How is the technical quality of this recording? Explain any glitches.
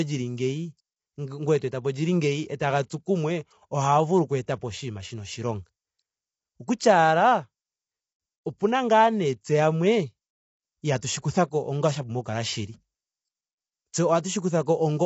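The technical quality is compromised by low-bitrate, low-delay coding, with a few smeared attacks.

Low-delay AAC compression runs through the whole recording, most likely an AAC-ELD encoder at a bitrate that sounds close to 24 kbps. Its short analysis frames can't separate the voice's harmonics cleanly, and there are too few bits to fill them in, so the speech comes out rough and grainy, with noise sitting between the harmonics. The top band is cut off, with nothing above about 7.7 kHz.

Pre-echo appears three times: from 2.58 to 2.60 s, at 2.89 s, and from 11.00 to 11.02 s. Each time, a sharp onset lands near the end of a coding block. The codec sizes its noise for the loudest part of that block and spreads it across the whole block, so the quiet stretch just before the attack fills with hiss. That hiss runs ahead of the onset by about 20, 18 and 25 ms respectively, and each attack sounds softened and smeared.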